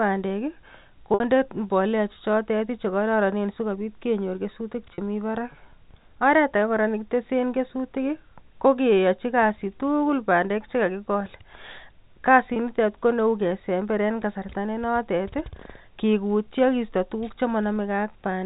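Packet loss with pitch repetition bridges three gaps: 60 ms at 1.14 s before "mbolea chechotet", 40 ms at 4.94 s after "chekororonen sikobit kenyor kesutik", and 20 ms at 12.54 s before "koneu kesember". The receiver repeats the last pitch period, so each gap sounds like a brief, buzzy held tone.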